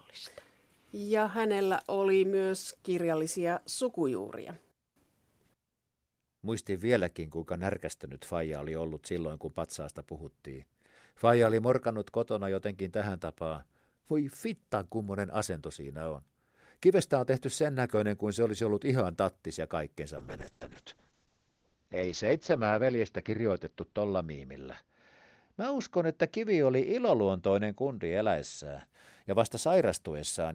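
After "ihan tattis ja kaikkensa", a call bitrate drop (20.19–28.93 s) cuts encoding from 32 to 6 kbps. Highs stop at 8 kHz. Speech turns muffled, rough.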